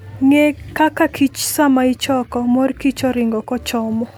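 Nothing stood out on listening to this speech recording.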